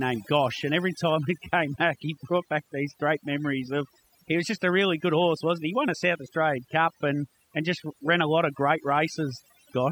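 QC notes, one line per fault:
Throughout: overdone noise removal. A noise reduction stage was pushed far too hard on this speech. Wherever a frequency band sits close to the estimated noise floor, it is pulled right down or switched off. The quiet parts of the speech fall into those bands and vanish with the noise. Gaps between phrases drop away, dotted with twinkling specks.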